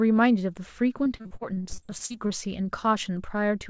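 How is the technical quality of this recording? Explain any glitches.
The speech has one clear glitch, set against a call-codec sound with nothing above 8 kHz, which fits G.722. From 1.04 to 2.32 s there is repeated packet loss, giving a robotic sound. Over a dozen short gaps occur, the longest about 43 ms. Each is patched by stretching the preceding sound. Roughly a third of that stretch is filled in this way. The speech turns choppy, with pieces missing.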